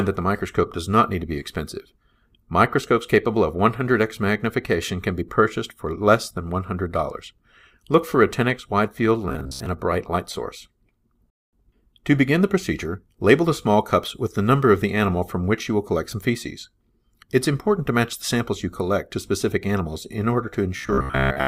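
From 9.29 to 9.66 s and again from 20.77 to 21.47 s, the audio takes on a fixed 66.8 Hz buzz with a mechanical, metallic edge. This is robotic sound, likely from repeated short buffers: a 15 ms fragment loops in place of most of the real signal, which is skipped.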